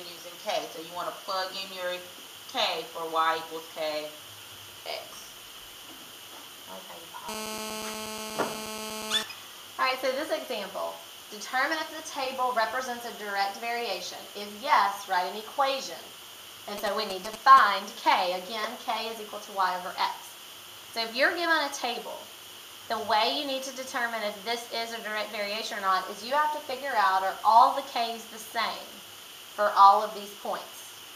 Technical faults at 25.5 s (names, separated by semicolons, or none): none